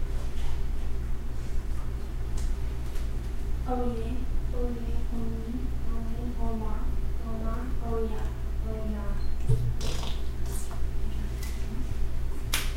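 No technical faults can be heard anywhere in these sounds. There is nothing in the audio that needs a timestamp or further comment.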